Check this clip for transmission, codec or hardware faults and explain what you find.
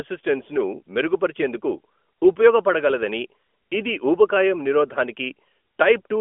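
No transmission, codec or hardware faults.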